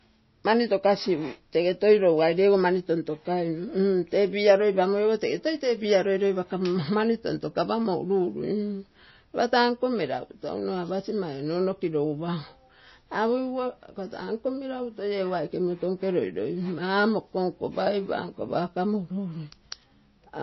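MP3 compression, throughout the clip: the damage to the speech is plainly audible. The likely cause is an MP3 encode at a low bitrate, consistent with roughly 25 kbps. With so few bits available, the encoder drops weaker frequency lines, which flicker on and off between frames. This gives the speech a watery, swirling quality, with chirpy, metallic s sounds and softened consonant attacks.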